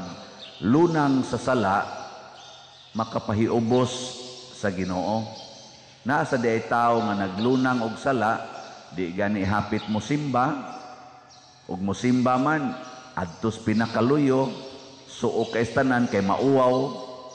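Nothing here calls for attention, as no technical faults turn up anywhere in the audio.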